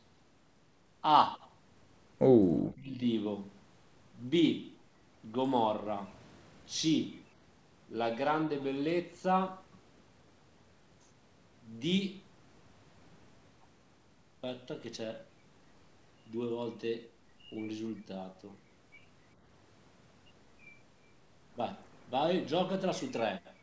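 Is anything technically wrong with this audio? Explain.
Yes. Between 2.72 and 3.06 s the speech suddenly sinks, at its deepest by around 30 dB, for roughly a third of a second in total. This is likely speech suppressed in double talk: with both ends talking at once, the echo canceller mistook this talker for loudspeaker echo and turned them down. The band ending at 8 kHz fits a wideband call codec.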